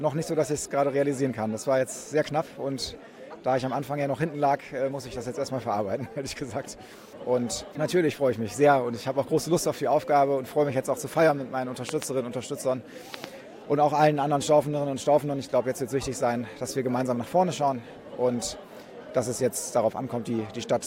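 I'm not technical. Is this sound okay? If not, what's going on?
No. There are two loud pops, from about 11.89 to 12.04 seconds and again from 13.14 to 13.26 seconds. Each is a quick double pop, much louder than the sound around it, while the audio carries on underneath. The likely cause is a sudden electrical jolt, such as a plug being moved, a switch being flicked or a static spark, that got into the signal and was shaped into a sharp snap by the equipment after it.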